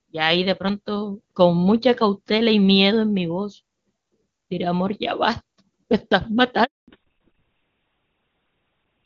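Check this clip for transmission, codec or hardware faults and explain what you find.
Two faults appear, both near the end of the speech.

A handover gap runs from 6.64 to 6.88 s: no frames arrived while the call switched networks, leaving 240 ms of flat waveform and an empty spectrogram column.

Immediately after, at 6.88 s, fallback to narrowband begins and lasts to the end. The call drops from wideband, whose clean earlier sound fits HD Voice at a high rate, to an older codec, plausibly GSM full rate. Everything above 4 kHz disappears, so the spectrogram shows a hard ceiling and the speech sounds duller and rougher.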